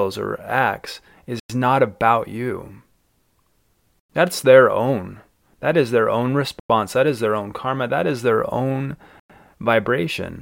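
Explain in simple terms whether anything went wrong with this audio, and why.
The speech has a gap between chunks problem: four silences of 100 ms, at 1.40 s (right after "or acts"), 4.00 s, 6.60 s and 9.20 s (both after "is their own"). The audio arrived in 2.5-second pieces, and silence got inserted at each join.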